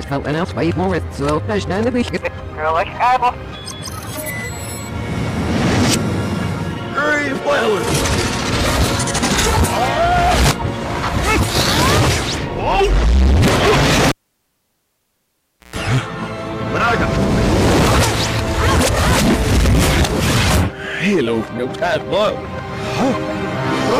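At 14.09 s a pop drops the sound to near silence for 1.62 s, then a 133 ms burst of 60 Hz buzz and another pop at 15.76 s: cable pulled and plugged in.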